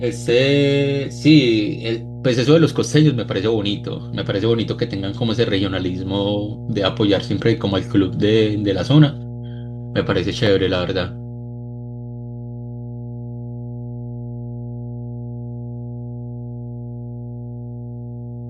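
Mains hum runs through the whole of this speech recording, from start to finish: a steady low tone at 60 Hz sits under the voice, loud enough to be only modestly below the speech itself. The power line has leaked into the signal path, most plausibly through a ground loop between connected equipment or from a transformer close to the microphone or cabling, so the hum carries on unchanged during pauses as well as under speech.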